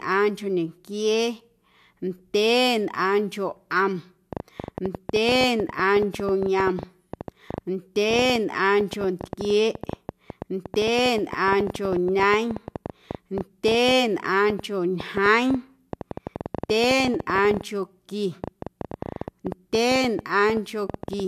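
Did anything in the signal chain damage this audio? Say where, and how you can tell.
Yes. From 4.33 s right through to 21.21 s there's a train of clicks, around 9.5 per second on an uneven pace, roughly 150 in all, peaking about 10 dB above the speech. Same-shaped ticks riding over everything point to likely interference or a struggling interface.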